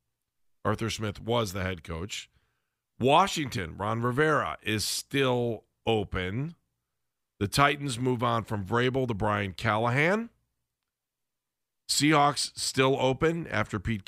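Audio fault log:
2.64–13.21 s, clock drift buffer slips: four clicks recur every 3.52 s in the speech, each likely a few samples dropped or repeated as two independent clocks about 50 ppm apart drift. The strict regular spacing sets them apart from random dropouts.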